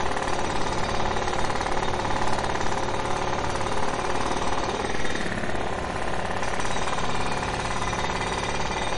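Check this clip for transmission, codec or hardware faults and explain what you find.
One fault runs through the whole clip: MP3 compression, likely from a low-bitrate encode around 40 kbps. Short of bits, the encoder zeroed weak frequency lines, which then flicker on and off from frame to frame. The result is plainly audible watery, swirling artefacts, with transients smeared rather than crisp.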